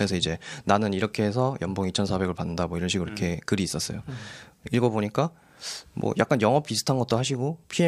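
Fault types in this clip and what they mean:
No faults to report in this speech recording.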